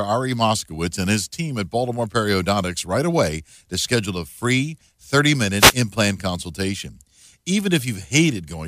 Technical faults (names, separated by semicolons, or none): wireless microphone noise hit